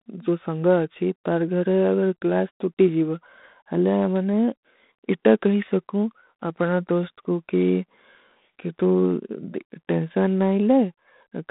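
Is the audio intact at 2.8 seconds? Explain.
No, at 2.8 s the speech is under G.726 ADPCM coding, which runs through the whole clip. Each sample is coded as a coarse difference from a prediction, leaving a rasping hiss that tracks the speech level, which fits 24 kbit/s. Nothing comes through above about 3.9 kHz.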